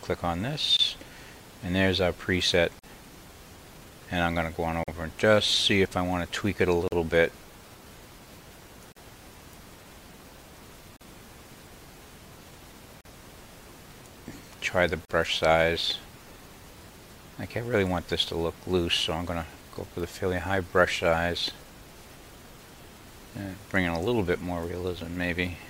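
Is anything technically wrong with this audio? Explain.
Yes. The sound drops out briefly at 0.77, 2.79, 4.84, 6.88, 8.92, 10.97, 13.01 and 15.05 s, then resumes where it left off. Each is a gap at a join of encoded pieces, where separately encoded two-second chunks were joined untrimmed. Each encoder run's leading delay and padded final frame remain as silence, about 23 ms at the first join and 43 ms at the others, with edges smeared by the codec.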